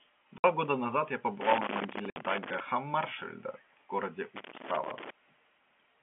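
At 0.38 s the speech drops into a hole lasting 60 ms, ending at 0.44 s. This is packet loss filled with silence. Missing audio was replaced by silence, and the length fits three 20 ms packets. On the waveform it shows as a flat line with abrupt walls. The spectrogram shows a clean vertical gap across all frequencies.

From 1.41 s to 2.60 s comes loose connector crackle. An intermittent contact keeps making and breaking, so the signal is chopped irregularly, and any DC on the line adds pops. It sounds like scratchy, uneven crackling laid over the speech. The waveform shows ragged bursts and sharp spikes. The spectrogram shows scattered vertical streaks reaching the top of the narrow telephone band. This band runs from about 250 Hz to 3.4 kHz and comes from the telephone line carrying the G.711 coding.

Inside that crackle, a second 60 ms silent dropout runs from 2.10 s to 2.16 s. It has the same hard-edged gap.

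The crackle returns from 4.36 s to 5.10 s, with the same irregular, spiky texture and streaked spectrogram pattern.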